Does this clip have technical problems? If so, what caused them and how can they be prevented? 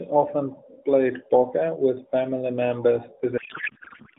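Yes. From 3.38 s to the end, the speech gives way to garbled noise and warble that barely tracks it. This is a codec payload misread. The audio passes through an AMR narrowband mobile codec, audible as the band-limited 200 Hz to 3.7 kHz sound before the fault. At that point the decoder starts unpacking frames packed in octet-aligned mode as though they were bandwidth-efficient, so every field is read from the wrong bits. To prevent it, make sure both ends negotiate and keep the same AMR payload format.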